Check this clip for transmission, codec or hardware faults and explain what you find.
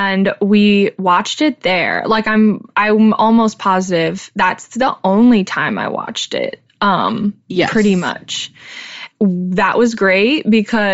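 One fault runs through the whole clip: Bluetooth LC3 compression. From start to end, the speech carries a plainly audible breathy, grainy edge. The likely cause is LC3 coding at a low bitrate, fitting about 32 kbps with 10 ms frames. The coder drops much of the upper spectrum and refills it with noise. That substituted noise makes the grain.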